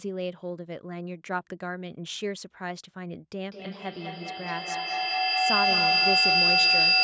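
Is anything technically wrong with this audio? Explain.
Yes, there's a feedback howl from 3.51 s right to the end. Two devices in the room are feeding each other, each pass round the loop adds gain, and it locks onto a tone near 5 kHz, with the loop repeating roughly every fifth of a second and peaking about 11 dB above the speech.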